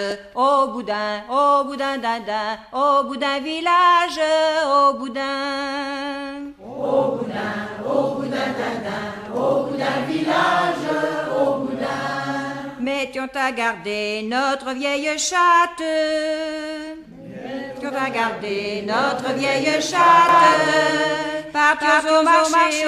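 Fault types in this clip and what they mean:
Doubled audio track: from 20.29 s, a similar-level full-band copy trails about 300 ms behind; waveform and spectrogram show each event twice, abruptly starting.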